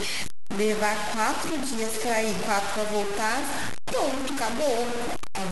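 Throughout the speech, grainy distortion tracks the sound, likely low bit depth without dither at 3 bits: coarse stair steps on the waveform, broadband grit on the spectrogram.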